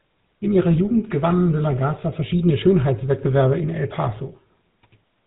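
From start to finish the speech carries GSM full-rate codec damage, plainly audible, with a buzzy, gravelly roughness consistent with a 13 kbps bitrate. The vocal-tract model is driven by sparse, regularly spaced excitation pulses, and nothing above about 3.8 kHz survives.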